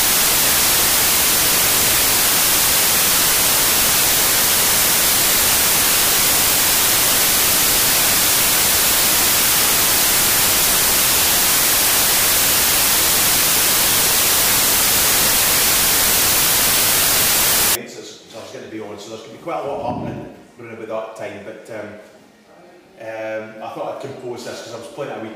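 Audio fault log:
0.00–17.75 s, samples built from the wrong bytes: for this stretch the reader is putting each sample together from the wrong bytes, maybe off by one, maybe swapped order, and the quick-changing low bits end up in the top of every value. So the real signal gets buried under loud, hissy white noise, then it stops at 17.75 s.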